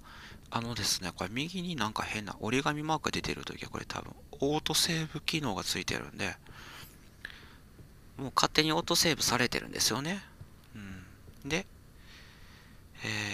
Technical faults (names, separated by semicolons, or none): drift correction step